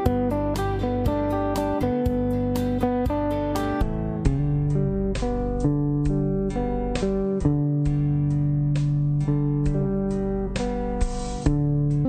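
From 3.82 s to 12.05 s the audio plays at 0.555 times its proper speed, a section at the wrong speed, likely from playback against a mismatched clock. Unlike a time-stretch or pitch-shift, tempo and pitch fall together, here by about ten semitones.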